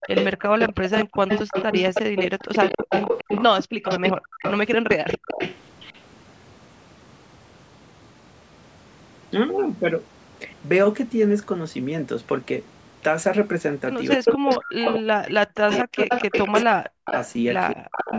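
From the start to 6.0 s, a delayed copy of the speech trails the talker by 247 ms at about the same loudness. This echo leak is likely from a far end on loudspeaker whose echo canceller let its own microphone pickup pass back down the line. The same quarter-second echo returns at 14.26 to 14.96 s (slightly louder than the speech), 15.71 to 16.63 s, 17.06 to 17.3 s, and more faintly from 17.74 s to the end.

At 3.65 s, the room background drops out abruptly by about 40 dB for around 150 ms and recovers at 3.82 s. This is background gated by the echo canceller, which clamped the microphone hard while the loudspeaker was playing.

From 14.16 to 17.08 s, the talker's speech dips and breaks up in pieces, falling by as much as about 40 dB for roughly two seconds in total. It happens again, more briefly, from 17.75 to 18.13 s. This is speech suppressed in double talk, likely caused by both sides speaking at once, so the canceller could not tell the talker from the echo and turned everything down.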